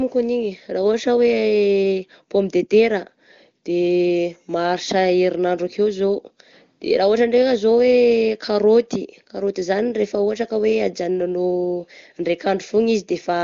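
No technical faults can be heard anywhere in this recording.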